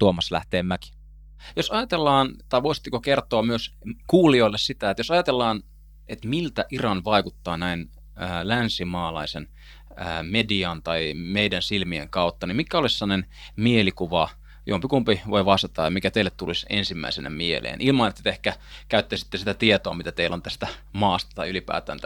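Mains hum runs under the speech from start to finish: a steady 50 Hz tone, roughly 25 dB below the speech, picked up through a ground loop or nearby transformer. A spectrogram shows an unbroken horizontal line at 50 Hz with fainter harmonic lines above it.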